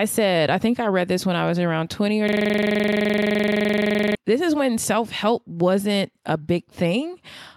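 From 2.29 to 4.15 s, a system hang loop replays one 42.67 ms slice of speech 44 times while the driver stalls, which fits a 2048-sample buffer. It repeats at 23.4 Hz before "this is when self". The waveform shows identical repeating blocks, and the spectrogram shows regular vertical stripes.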